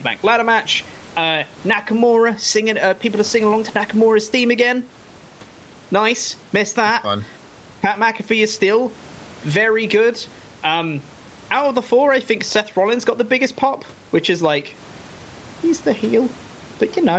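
Speech in which the microphone gain was likely set far too high, so a fast limiter clamps down on every loud sound, producing gain pumping throughout. The gain swings by around 10 dB, leaving the sound squashed.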